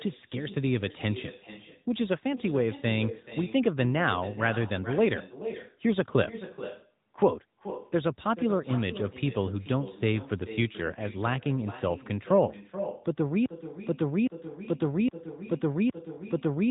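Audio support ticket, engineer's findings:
Echo with no canceller, throughout. Every phrase returns roughly 0.4 s later, about 14 dB down, thinner. Far-end loudspeaker feeding its own microphone. No echo cancellation removing it before the signal comes back over the network.

AMR narrowband mobile codec, throughout. Plainly audible buzzy, synthetic speech quality. Nothing above 3.8 kHz. Pulse-driven vocal-tract model at narrowband sampling. The damage level fits a mid-rate AMR-NB mode, around 10 kbps.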